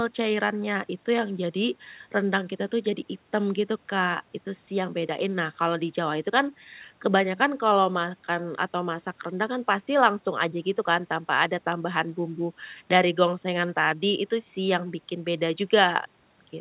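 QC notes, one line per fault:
No faults are heard in this speech clip. It comes through a call path that carries nothing above 4 kHz, which fits a narrowband telephone codec such as G.711.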